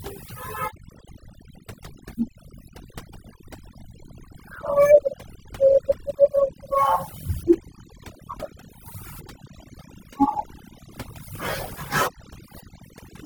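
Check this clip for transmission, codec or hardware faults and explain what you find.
One fault is present: overdone noise removal, running through the whole speech clip. A noise reducer was set too hard. Frequency bands near its noise estimate get pulled down or cut, taking quiet speech detail too. Pauses fall nearly silent with twinkling specks.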